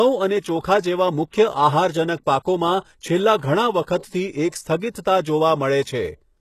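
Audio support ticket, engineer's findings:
Throughout: plainly audible codec damage, s sounds gritty and lispy, treble bright but synthetic, nothing above 12.3 kHz. Likely HE-AAC compression, fitting a 16 kbps stream. Upper band rebuilt from copied lower bands, harmonics misaligned at crossover. Unlike plain low-pass, top stays bright, not dull.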